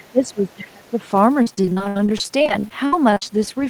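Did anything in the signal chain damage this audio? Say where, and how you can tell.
Yes. In the call processing stage, the very start of the clip, 0.0 to 0.07 s, carries a faint trace of the other side's voice leaking through, sitting about 30 dB below the talker. The likely cause is a loudspeaker on the talker's device feeding the far end back into the microphone, with the echo canceller leaving a small residue. It is brief, a scrap rather than a sustained second voice.

From 0.0 to 1.08 s the talker's speech is suppressed in double talk, again a call processing fault. For roughly a second the level sags, at its deepest by around 25 dB, so the voice fades in patches. The likely cause is the echo canceller failing to tell the near talker from the loudspeaker echo while both were active, and attenuating everything it could not separate, including the talker.

From 1.42 to 3.47 s the network stage shows repeated packet loss, producing the robotic sound. 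Around thirty short holes land close together, the longest about 70 ms, and roughly 30% of that stretch is patched-in sound rather than real signal. Each gap is filled by extending the last received sound, then the next loss arrives, so the speech turns choppy and robotic, with fragments missing.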